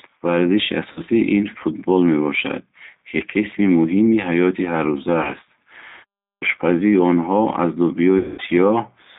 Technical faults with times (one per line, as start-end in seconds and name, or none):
0.00-9.18 G.729 codec
0.92-1.01 VoIP packet loss concealed by the speech codec
3.18-3.22 VoIP packet loss concealed by the speech codec
5.23-5.33 VoIP packet loss concealed by the speech codec
6.31-6.42 clipped start after a pause
8.18-8.42 VoIP packet loss concealed by the speech codec